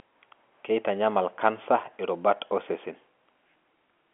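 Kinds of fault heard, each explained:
No faults can be heard in the speech. It comes through G.711 telephone coding working normally, so the sound sits in a narrow line band of roughly 250 Hz to 3.4 kHz, with nothing above about 3.7 kHz.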